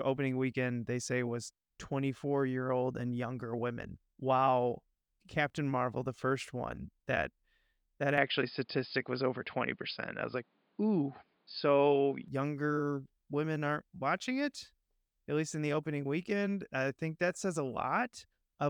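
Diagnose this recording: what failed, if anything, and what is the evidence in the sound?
From 8.18 s to 12.28 s the speech turns dull and boxy, and the dullness begins just before "younger women aren't watching". There is no gap at either transition, but the level steps by a few decibels and a different, faint noise floor appears. The likely cause is an input switched to a poorer device at the driver stage, a narrower-band microphone or headset profile. On a spectrogram, everything above 5.1 kHz vanishes for that stretch, and the waveform shows matching level steps.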